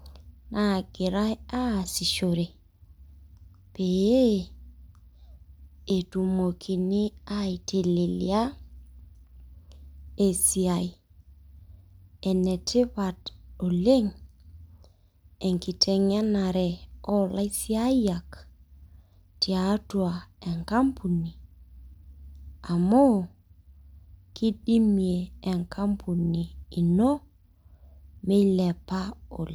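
No technical faults can be heard anywhere in this recording.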